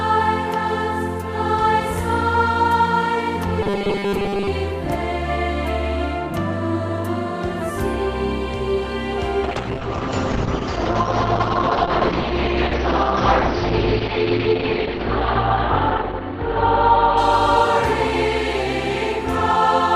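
From 3.62 to 4.48 s the sound turns into a rigid, metallic buzz at 200 Hz. This is robotic sound from repeated short buffers. It likely comes from audio arriving too seldom. The gap is filled by looping a 5 ms slice, and most of the real audio is skipped.

At 9.44 s a call bitrate drop begins and lasts to the end. The highs vanish above 6 kHz, down from 20 kHz. The audio turns rough and muffled. This points to the encoder falling from 128 kbps to 8 kbps, with the worst stretch lasting about 6 s.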